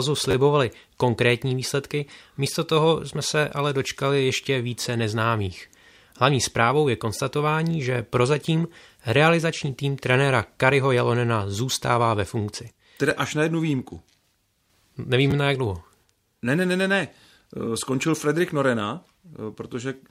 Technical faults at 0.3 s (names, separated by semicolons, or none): repeated buffer